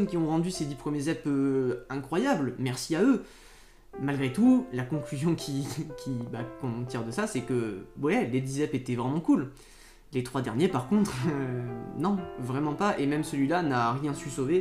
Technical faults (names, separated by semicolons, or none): train of clicks